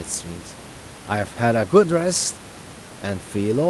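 Speech, with no technical faults to report.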